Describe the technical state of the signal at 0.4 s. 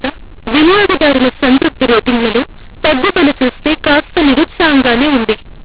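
At 0.4 s the speech carries a mu-law and A-law mix-up, present throughout: samples coded as A-law are read back as mu-law, scrambling levels and lifting quiet samples into noise. Unlike clean G.711 noise, which tracks the signal, this harshness fills even the pauses.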